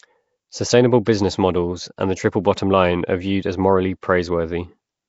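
From start to end the speech carries a rough, hissy halo and a smeared, underwater quality. Nothing survives above 7.7 kHz. This points to Nellymoser compression, likely from the old Flash microphone codec, at a rate that fits a 32 kbit/s stream. It spends a fixed, small bit budget on each short block. Weak bands get no bits and are filled with noise. That noise fill makes the grainy haze.

At 1.05 s there is a pre-echo, lasting 14 ms, just before "models and the triple". A short hiss leads into the onset, and the attack sounds soft. At 4.01 s, just after "are viewed as morally", a second pre-echo lasts 18 ms. The codec spreads its quantisation noise across a whole block. A sharp attack late in the block pushes that noise back into the quiet gap before it.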